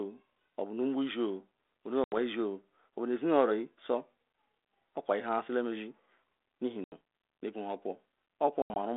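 Speech over a narrow telephone line shows packet loss on an ADPCM call three times. The sound drops into hard-edged silence at 2.04–2.14 s and 6.84–6.95 s, losing 80 ms each. At 8.62–8.77 s, 100 ms goes missing in scattered gaps, the longest run 80 ms. Each time the sound resumes slightly distorted before settling. The missing packets were filled with silence, so the decoder's adaptive predictor and step size lost track of the sender's and needed tens of milliseconds to recover.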